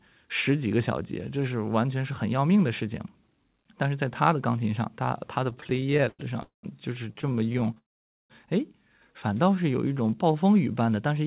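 From 5.5 to 6.21 s there are repeated stalls, a stutter. Packets arrived late, so the jitter buffer kept running dry. It happens 18 times, the longest gap about 102 ms. The receiver stretched the last sound to fill 258 ms, about 37% of that span. Nothing is lost, but the sound lurches and drags.

At 6.43 s comes a call audio freeze lasting about 0.2 s. The last sound hangs briefly, then goes silent for about 130 ms. Playback resumes where it stopped. Packets were likely held up in transit, leaving the buffer empty.

From 7.13 to 7.78 s the stutter returns. There are 19 short gaps, none over 18 ms, filling 192 ms, about 29% of the span. It sounds like rapid choppy hiccups rather than long holds.

At 7.78 s a longer call audio freeze follows, running to 8.32 s. The held sound fades quickly into about 480 ms of silence. Then the audio picks up again with nothing dropped. The likely cause is a longer packet delay, about 0.5 s, that emptied the buffer.

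From 9.44 to 10.44 s there is a jitter buffer slow-down. The buffer was rebuilding its reserve. It did this by repeating single pitch periods and bits of pauses. That added 121 ms, so playback runs at about 89% speed. Pitch stays the same, but sounds are drawn out. Through the whole clip, the narrowband call path cuts everything above 4 kHz.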